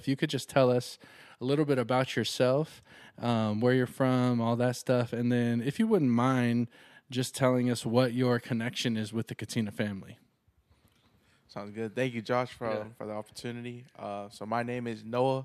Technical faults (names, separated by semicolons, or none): none